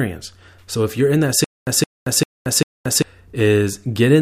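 From 1.44 to 3.02 s, a 168 ms burst repeats four times every 395 ms with 227 ms silences: stutter with silent gaps, likely a stalled stream replaying its last fragment.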